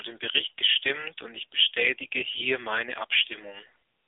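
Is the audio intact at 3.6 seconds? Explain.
No, AMR narrowband mobile codec damage runs throughout, so at 3.6 s the speech sounds buzzy and synthetic. A low-rate mode, likely near 8 kbps, drives sparse pulse modelling. A spectrogram shows a 300 Hz–3.6 kHz band, empty above 3.7 kHz.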